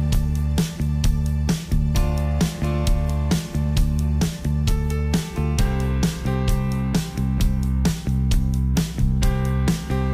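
Nothing stood out as a problem on listening to the sound.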